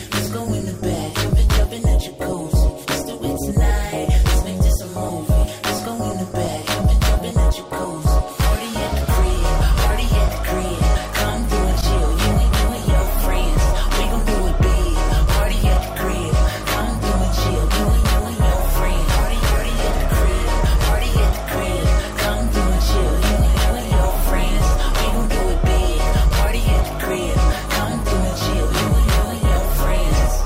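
No technical faults are audible.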